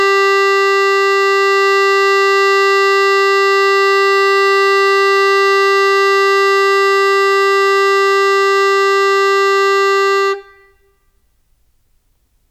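From 0.25 s to 12.04 s the music carries faint ticks about every half second, around thirty in all. These are clock slip clicks, likely from two devices running on unsynchronised clocks about 40 ppm apart, so a single sample is dropped or repeated each time the drift adds up to one sample. Their steady, metronomic spacing sets them apart from buffer dropouts, which arrive irregularly and leave audible gaps.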